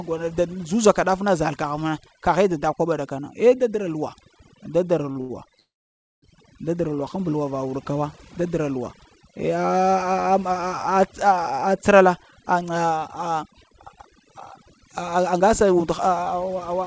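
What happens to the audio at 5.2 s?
Two packets arrived late, so the jitter buffer ran empty and the receiver stretched the last sound to cover the gaps: about 30 ms from 5.12 to 5.17 s, then about 85 ms from 5.21 to 5.31 s. Nothing is lost; the speech simply hangs briefly twice, with a slight buzz or dip.

Across this moment, as everywhere, overdone noise removal is also at work: an over-aggressive suppressor has pulled quiet frequency bands down, leaving a lowered background that breaks up into twinkling specks.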